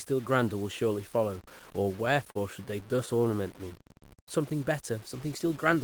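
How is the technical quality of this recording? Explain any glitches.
The technical quality is poor. A gritty distortion runs through the whole speech clip, and a stretch in the middle stutters and then drags.

Low bit depth without dither is heard from start to finish as a grainy roughness that rises and falls with the voice. The error sits roughly 25 dB below the signal, which fits about 7-bit truncation. Because there was no dither, the rounding error tracks the waveform instead of becoming steady hiss. On a waveform, quiet passages show visible stair-steps. On a spectrogram, the noise floor is broadband and moves with the speech.

Repeated stalls (stutter) occur from 1.83 to 3.24 s. There are 12 brief interruptions, the longest 42 ms, totalling about 150 ms of concealment, roughly 11% of that span. Each time, the receiver's buffer ran dry and it extended the last sound until data arrived, so the speech catches and lurches without losing anything. 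A spectrogram shows short smeared, repeated slices.

Jitter buffer slow-down follows from 3.25 to 4.40 s. The playback runs at about 96% speed, stretching that section by 47 ms while the pitch stays the same. The receiver rebuilt its reserve by repeating pitch periods and pause fragments, so sounds feel drawn out. On a spectrogram, the harmonics stay level but the features are spaced slightly wider apart in time.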